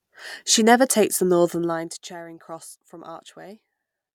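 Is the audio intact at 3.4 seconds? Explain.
Yes, the speech is intact at 3.4 seconds, with no fault at that moment.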